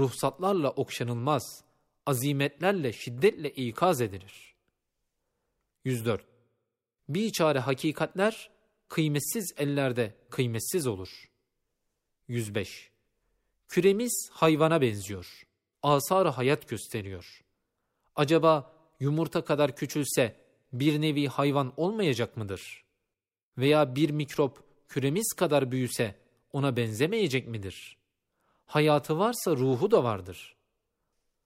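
Nothing in this recording stands out as a technical fault, so there's nothing to walk through moment by moment.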